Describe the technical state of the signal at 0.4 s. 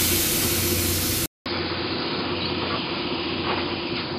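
At 0.4 s the signal is intact, with no dropout, distortion or other technical fault at that point.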